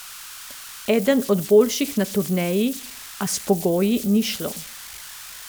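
Converter idle tones run throughout this speech clip: an undithered delta-sigma converter settles into repeating bit patterns on small input, leaving a whistle around 1.5 kHz in pauses, sitting about 16 dB below the speech, with grainy noise under quiet passages.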